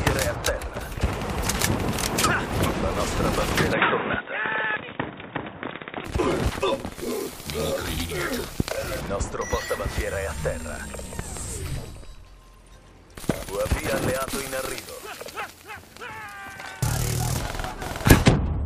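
From 3.73 to 6.05 s the sound turns dull and boxy, with nothing above 3.8 kHz. The input was likely switched to a poorer device. There is no gap at the switch and no level change. A faint new noise floor sits about 35 dB down.

Loud pops follow, likely from electrical glitches on the line. A sharp single pop at 8.60 to 8.63 s peaks about 20 dB above the sound. Two weaker pops fall between 11.19 and 11.39 s, about 10 dB up. Another single pop at 13.30 to 13.32 s reaches about 20 dB. The sound carries on beneath each one.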